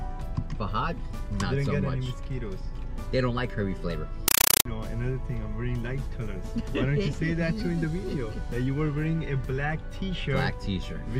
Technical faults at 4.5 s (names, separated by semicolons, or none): compressed stream played as audio